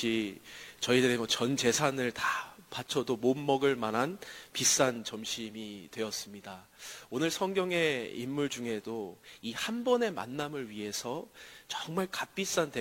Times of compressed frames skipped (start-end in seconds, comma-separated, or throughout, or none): none